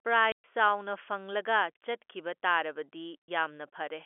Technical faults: packet loss filled with silence

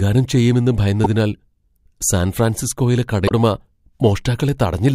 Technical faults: damaged data in a compressed stream

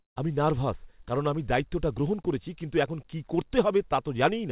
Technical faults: short concealed packet loss

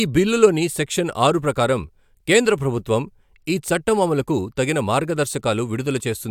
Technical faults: none

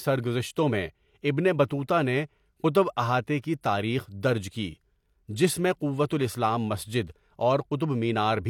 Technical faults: pre-echo

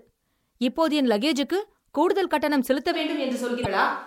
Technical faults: switch to a distant microphone; damaged data in a compressed stream

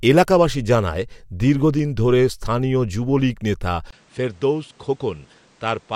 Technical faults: input switched to a poorer device

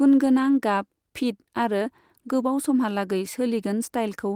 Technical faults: none

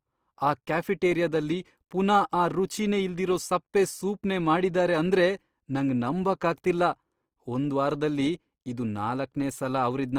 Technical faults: Opus compression

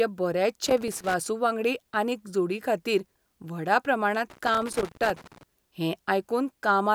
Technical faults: loose connector crackle

